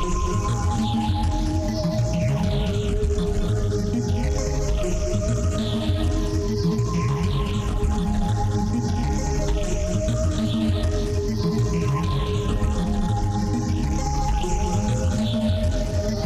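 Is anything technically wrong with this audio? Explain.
No, the recording of these sounds is technically sound, with nothing in the signal pointing to a defect in how it was captured, processed or delivered.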